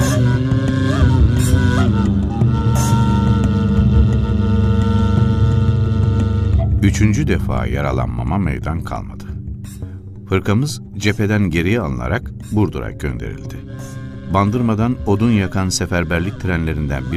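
Nothing stood out as wrong on listening to this clip.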